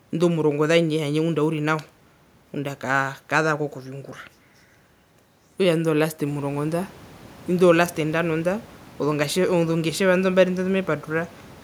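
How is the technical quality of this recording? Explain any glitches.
No glitches or system faults.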